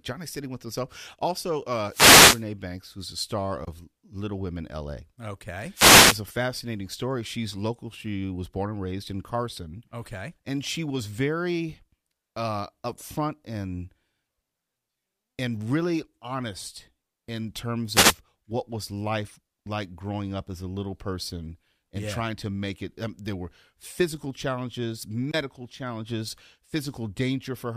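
Wireless microphone noise hits occur at 1.89 to 2.44 s, 5.73 to 6.20 s and 17.93 to 18.15 s. Each time the FM radio link fades as reflected signals cancel, receiver noise rises over the speech, and a brief swish of static is heard.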